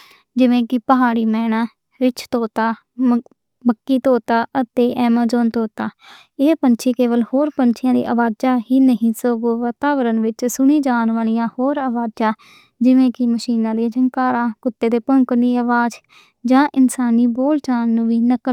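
Nothing in the speech recording stood out as a technical problem on listening.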